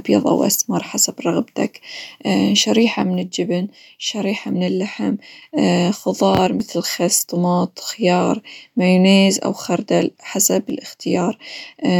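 One channel drops out three times in this speech: from 3.02 to 5.42 s, from 6.47 to 6.60 s just before "خس طماط خيار مايونيز", and from 10.70 to 11.00 s just after "مايونيز أو خردل حسب". Each time the level falls abruptly by about 6 dB and recovers just as suddenly. That step is what a mono sum gives when one side of a stereo pair goes silent, so one channel likely cut out briefly, leaving only half the summed signal.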